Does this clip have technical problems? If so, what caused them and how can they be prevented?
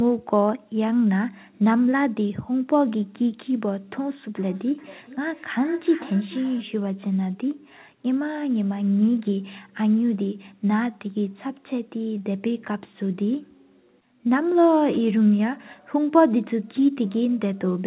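Yes. From 4.36 to 6.69 s the speech returns roughly every 400 ms, fading, about 20 dB down: feedback echo between two devices, one replaying what the other's microphone sent. Muting or headphones on all but one nearby device prevents it.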